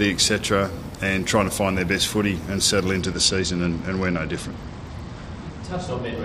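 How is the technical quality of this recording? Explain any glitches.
The second half of the recording is degraded. From 3.00 s to the end there is a Bluetooth SBC bit pool drop. The encoder cut its bit allocation, fitting a fall from bit pool 31 to 11, near 83 kbps. The upper sub-bands are starved and the remaining bands coarsely quantised, so the treble dulls and a gritty noise rises.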